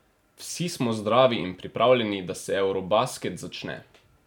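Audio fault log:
No audible faults detected.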